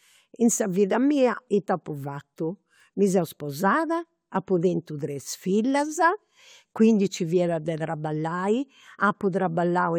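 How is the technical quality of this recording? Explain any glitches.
Nothing in the speech stood out as a technical problem on listening, so there are no glitches to explain.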